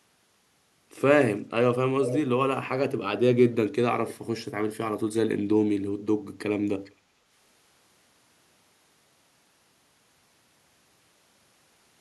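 A far-end echo canceller likely let its loudspeaker pickup through, causing echo leak: at 2.07–2.17 s a copy of the speech returns about 441 ms late, nearly as loud as the original, and at 6.85–6.94 s a much fainter scrap follows about 450 ms behind.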